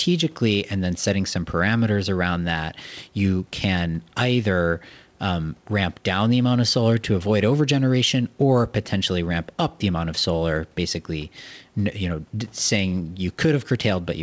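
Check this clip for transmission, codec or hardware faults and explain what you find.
No faults detected.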